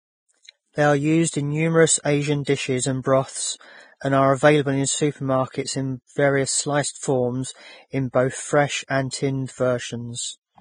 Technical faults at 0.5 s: Vorbis compression; pre-echo

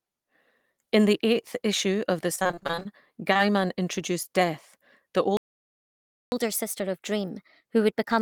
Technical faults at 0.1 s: none

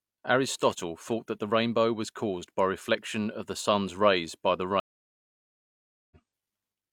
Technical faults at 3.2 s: none

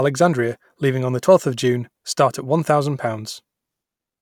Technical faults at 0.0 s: none

